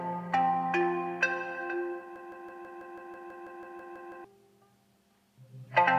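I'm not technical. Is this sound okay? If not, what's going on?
No. From 2.16 s to 4.24 s the sound gets stuck. A tiny slice, about 0.16 seconds long, plays over and over, 13 times in a row. It is a broken-record loop. The likely cause is that the player or stream stalled and kept repeating the last bit it had. Whatever should have played during those two seconds is gone. Normal sound picks up again after 4.24 s.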